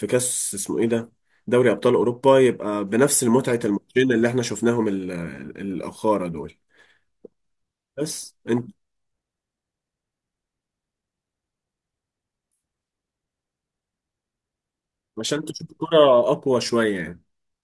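No technical faults can be heard in this speech recording.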